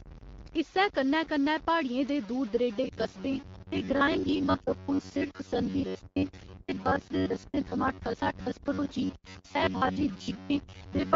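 Low bit depth without dither runs through the whole clip. The speech sounds grainy and gritty, with a roughness that rises and falls with the voice and sits only about 20 dB below it. The likely cause is samples truncated to around 6 bits with no dither, so the rounding error tracks the signal instead of spreading into a smooth hiss.

Robotic sound from repeated short buffers starts at 2.84 s and continues to 11.15 s. The voice turns into a rigid metallic buzz pinned at 93.8 Hz while still loosely following the speech. This likely comes from audio arriving too rarely, with playback looping stretches of about 11 ms to fill the gaps, so roughly half of what is heard is repetition and the real audio in between is lost.

An AMR rate drop lasts from 6.36 to 8.21 s. The AMR-WB stream falls from 12.65 kbit/s, where its coding is only lightly noticeable, to 8.85 kbit/s. The bandwidth stays the same and nothing drops out, but the voice turns rougher and more synthetic until the higher rate returns.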